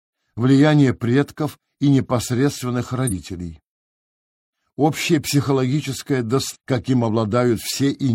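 At 3.07 to 3.13 s and again at 6.51 to 6.56 s, damaged data in the compressed stream makes the decoder misread frames and lose sync, giving a short glitch about 60 ms long. Each shows as a brief smeared block on a spectrogram and a jagged break in the waveform.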